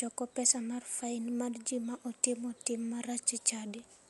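A low-bitrate encode, likely Dolby Digital compression, has left its mark on this speech recording from start to finish. The encoder has narrowed the band so that nothing survives above 11.4 kHz, and many frequency lines inside that band appear to have been starved of mantissa bits and refilled with dither noise on decoding. The result is plainly audible: dull, muffled speech with a rough, fluttering grain around voiced tones, which fits a rate near 64 kbps.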